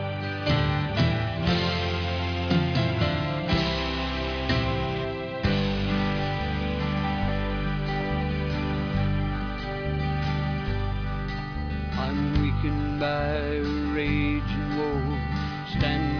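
No technical fault can be heard anywhere in this audio. Nothing in it calls for repair or a closer look.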